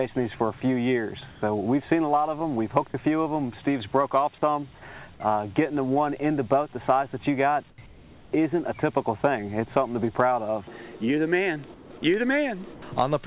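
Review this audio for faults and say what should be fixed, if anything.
In the quiet gaps, the real background drops out and a flat, featureless hiss takes its place. This happens at 1.3–1.42 s, 7.7–7.78 s, 7.86–8.32 s, 11.74–11.9 s and 12.74–12.82 s. The hiss is about 4 dB quieter in most gaps, about 13 dB quieter at 7.7 s and about 2 dB quieter at 12.74 s. This is comfort noise in place of the background, likely from discontinuous transmission. The sender stops transmitting during pauses, and the receiver fills them with a synthetic noise roughly matched to the background. It comes through the call codec's band limit, which leaves nothing above 4 kHz. Turning off discontinuous transmission at the sender would keep the genuine background audible through the pauses.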